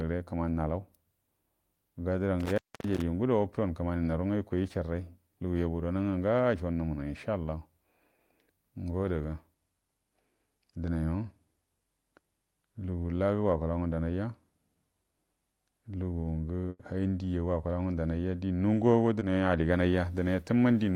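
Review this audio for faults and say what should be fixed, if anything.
Intermittent contact, 2.40 to 3.02 s: a loose plug or cable breaks the connection, and the speech drops out for about 0.27 s with crackle at each edge and only faint hiss between, recovering just before "ju ugudo watkuwan kumani". Reseat or replace the connector and strain-relieve the cable so it cannot shift.

Burst of packet loss, 16.69 to 16.81 s: a run of network packets was lost or arrived too late to play. The receiver stretched the last sound for 100 ms while fading it, then left about 20 ms of silence. Speech resumes with 100 ms skipped. Give the call a steadier connection and a larger jitter buffer so late packets still arrive in time.

Short concealed packet loss, 19.19 to 19.23 s, just after "ngundunai ja di nunguwago": about 20 ms of audio never reached the decoder. The gap was filled by extending the preceding sound and then blending back, leaving a brief smear in the speech. 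Reduce network congestion or enable forward error correction so isolated lost packets can be rebuilt.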